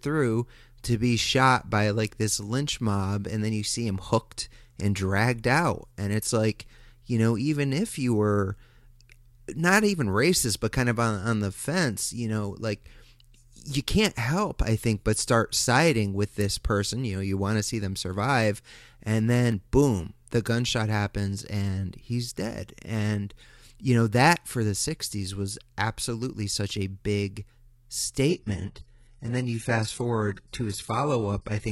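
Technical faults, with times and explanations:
28.29 to 31.71 s, adaptive stream at a lower bitrate: the speech abruptly loses its treble, with nothing above 11.5 kHz, and takes on a thin, artefact-laden sheen, with no gap. The stream switched to a much lower-bitrate version, which fits a step down to roughly 12 kbit/s HE-AAC, when the connection slowed.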